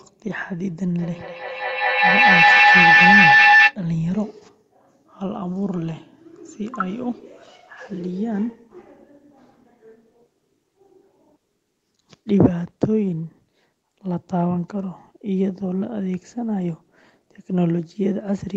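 From 0.98 to 3.77 s there's a feedback howl: the mic-to-speaker loop keeps gaining, building a tone around 2 kHz, about 9 dB above the speech and pulsing roughly every fifth of a second.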